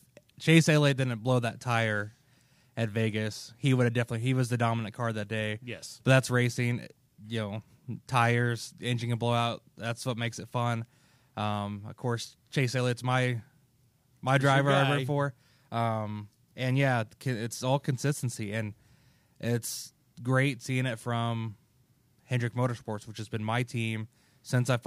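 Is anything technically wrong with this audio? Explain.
No, nothing in this speech recording points to a technical problem with the signal.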